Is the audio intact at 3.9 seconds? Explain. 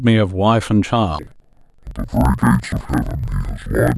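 No. At 3.9 seconds the speech is affected by interleaved audio read as planar, running from 1.19 s to the end. Each 1024-sample block of alternating left and right samples, about 42.67 ms long, is split in halves and played at half speed, so the speech sounds an octave low, doubled and choppy at a 23.4 Hz block rate.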